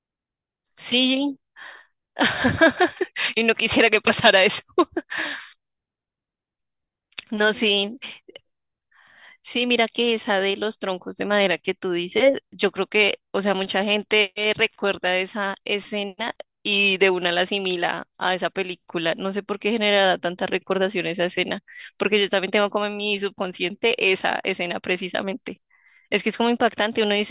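No technical faults are audible.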